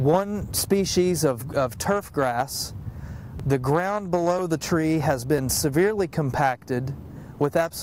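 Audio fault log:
0.42, 3.40, 4.39 and 5.38 s: audio missing between chunks. Brief skips of a few milliseconds, spliced shut with no silent gap, the last three recurring about 1 s apart, likely from one-second chunk handoffs.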